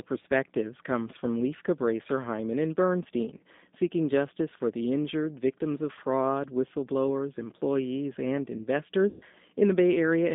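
Throughout, the speech sounds rough and synthetic, with a band from 200 Hz to 3.7 kHz. This points to the G.729 codec at 8 kbit/s. At 3.37 to 3.42 s and 9.09 to 9.24 s comes VoIP packet loss concealed by the speech codec. The decoder stretched its last sound into a fading buzz. The gaps fit about 30 ms and 120 ms of lost audio.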